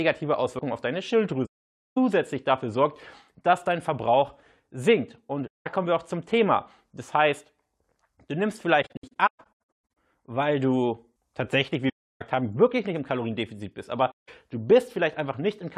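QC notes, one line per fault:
1.46–1.98 s, AAC frame loss with muting: a 512 ms silent hole after "auf deine", with the sound resuming at "dafür sorgt dass dein". The decoder zeroes the missing spectrum, so the overlapping windows fade the sound out and back in, leaving soft edges. On a spectrogram it is a fully blank column, and the waveform tapers to flat. The length fits roughly two dozen frames of about 21 ms each.
5.47–5.67 s, AAC frame loss with muting: a 192 ms faded gap just before "kommen wir auch zum". It is a blank spectrogram band with tapered edges.
8.82–9.79 s, AAC frame loss with muting: several short muted holes scattered across about 1.15 s, adding up to 725 ms of silence. The longest run is roughly 150 ms. The spectrogram shows a comb of blank stripes, and the waveform shows repeated soft dips into silence.
11.89–12.22 s, AAC frame loss with muting: a 320 ms soft-edged silence between "weil du tatsächlich wie" and "haben wirklich nicht im". 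The spectrogram column is clean and empty.
14.11–14.29 s, AAC frame loss with muting: a 171 ms muted gap. It appears as a narrow blank band with tapered edges in the waveform.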